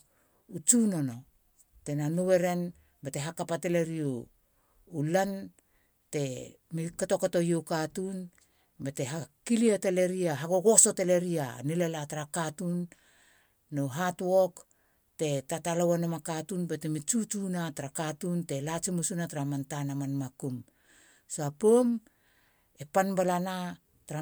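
No technical faults can be heard anywhere in the recording. Nothing interrupts or disturbs the speech at any point.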